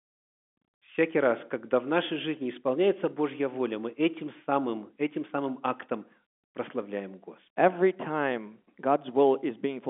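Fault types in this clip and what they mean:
Nothing stood out on listening, and the speech comes through as ordinary telephone-band audio with nothing heard above about 3.7 kHz.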